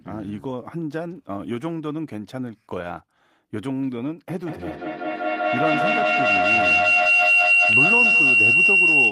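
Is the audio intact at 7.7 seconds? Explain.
No. A feedback howl runs from 4.3 s to the end: the microphone-to-loudspeaker loop gains level each trip, building a tone near 3 kHz, with a loop delay of about 200 ms, peaking about 10 dB above speech. Scattered short gaps also span 6.69 to 7.92 s, with around seven lost packets of up to about 20 ms each, patched by extending the preceding sound into brief ticks and smears.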